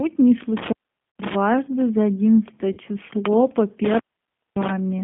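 Speech squeezed into a narrow 150 Hz to 3.6 kHz band with a rough, slightly synthetic grain throughout, the plainly audible mark of the G.729 codec at 8 kbit/s, likely its G.729A variant. Unlike simple band-limiting, the texture itself is rebuilt from a few pulses per frame. At 1.10 to 1.16 s and 2.73 to 2.79 s there is VoIP packet loss concealed by the speech codec: 60 ms and then 40 ms of lost audio are filled with a fading extrapolation rather than silence, which fits three and then two dropped 20 ms packets, and the voice stays weak for a moment afterwards. What separates these from a contact fault is that the gap is papered over with synthetic sound. From 3.84 to 4.70 s an intermittent contact opens the line for about 0.57 s, with crackle at each edge and faint hiss in between. This is a true dropout with no codec fill.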